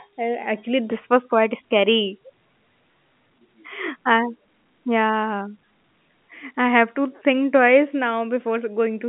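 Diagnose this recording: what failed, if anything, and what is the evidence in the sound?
Nothing failed; the speech comes through intact throughout.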